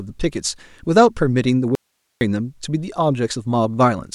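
An audio dropout to a faint residue runs from 1.75 s to 2.21 s. The speech cuts out abruptly in mid-flow for about 460 ms, and in its place there is only low hiss, roughly 50 dB below the normal speech level, before the voice returns just as suddenly. The hard edges on both sides set it apart from a natural pause or fade. The likely cause is a brief loss of the incoming signal while the downstream path stayed live and kept passing its own noise floor.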